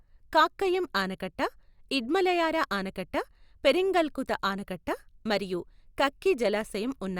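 No technical faults can be heard anywhere in the recording.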